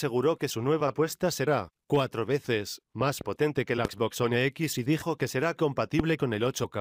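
Loud pops interrupt the audio three times. A double pop spans 3.01 to 3.23 s. Single sharp pops hit at 3.85 s and 6.00 s, well above the sound, which carries on underneath. A voltage spike from a switch or static is the likely cause.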